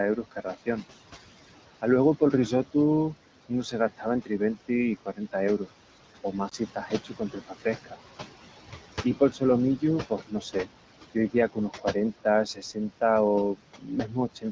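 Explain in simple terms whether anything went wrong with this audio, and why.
The background noise in this speech recording drops away between phrases and swells back under them. These are noise suppressor artifacts: a filter keeps turning down whatever it takes for steady room noise.

Some quiet sounds and word endings come out swallowed or faint, between 0.16 and 0.83 s, 1.82 and 2.75 s, 3.49 and 5.68 s, 6.24 and 7.96 s, 9.04 and 13.02 s, and 13.55 and 14.45 s. This is speech cut by the noise suppressor, which mistook those soft parts for background noise.

A tiny dip or warble falls between 6.49 and 6.54 s. These are lost AMR speech frames: a radio error dropped what sounds like one short slice of audio, and the phone patched over it.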